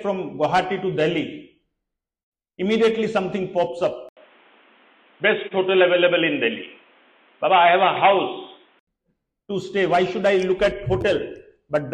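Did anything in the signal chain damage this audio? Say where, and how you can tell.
Yes. Likely an input switched to a poorer device, at the driver level, from 4.09 to 8.87 s: an 80 ms silence marks the switch, then nothing above 3.8 kHz, a new noise floor some 35 dB down, level unchanged, until the full band returns.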